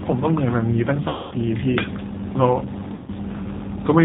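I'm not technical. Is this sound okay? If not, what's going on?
No. The whole clip has been through the G.729 codec, a phone-call compressor that rebuilds speech from a rough model, leaving it muffled, slightly rough and synthetic. There are two patches of VoIP packet loss concealed by the speech codec, at 1.09–1.34 s and 2.94–3.10 s, where pieces of the call went missing and the decoder filled each gap by stretching the last sound into a fading buzzy tone or noise.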